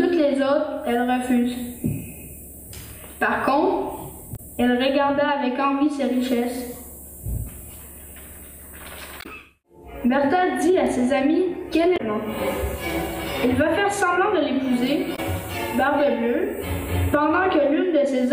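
At 4.33 to 4.40 s and 9.18 to 9.26 s, damaged data in a compressed stream makes the decoder misread frames and lose sync, giving a brief chirp, squawk, click or short hole. Each appears as a smeared, blocky patch lasting about 70 to 80 ms on the spectrogram, with a garbled waveform. At 10.87 s a bit error spike, one sample jumping by a power of two, produces a sharp tick. It shows as a thin full-height vertical line on the spectrogram and a lone needle in the waveform. The same damaged-stream glitch returns at 11.94 to 12.00 s. A second single-sample bit error tick follows at 14.87 s, and the last corrupted patch comes at 15.12 to 15.19 s.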